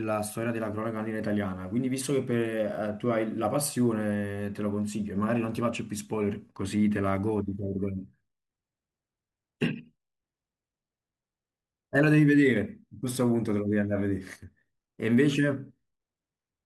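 Nothing stood out on listening to this speech recording.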